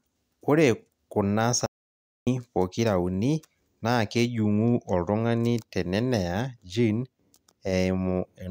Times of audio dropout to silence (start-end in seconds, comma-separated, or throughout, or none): 1.66-2.27